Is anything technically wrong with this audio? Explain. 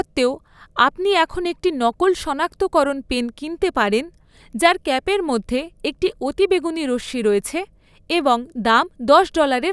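No, nothing technically wrong can be heard here.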